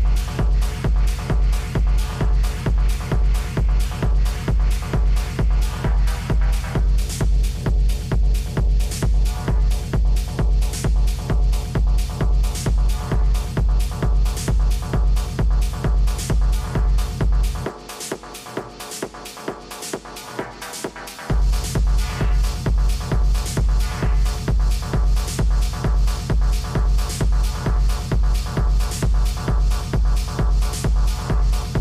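The signal holds steady throughout, with no dropouts, level jumps, distortion or other disruptions anywhere in the audio.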